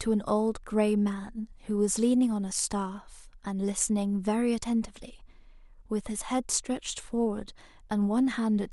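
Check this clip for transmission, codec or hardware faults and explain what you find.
Listening through the speech in this clip, nothing stood out as a fault of any kind.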